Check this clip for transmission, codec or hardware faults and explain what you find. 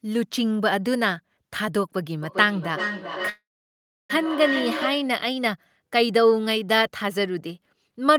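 Two faults are present, and they overlap in the middle of the clip.

Feedback echo between two devices, 2.23 to 5.22 s: a second device replays the speech into the microphone, so it returns about every 0.4 s, thinner and ringing, peaking at about 5 dB below the speech.

Call audio freeze, 3.29 to 4.11 s: the sound holds, then drops to silence for 0.68 s before resuming. This was likely caused by delayed packets emptying the jitter buffer. The freeze inserts a gap of 0.8 s but loses nothing.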